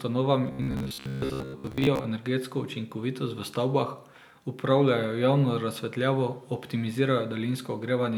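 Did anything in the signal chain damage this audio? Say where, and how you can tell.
Yes, the driver or buffer stage likely starved, looping a short buffer: robotic sound from repeated short buffers, 0.47–2.05 s, a rigid 66.7 Hz buzz before "energetsko učinkovitost v stavbah".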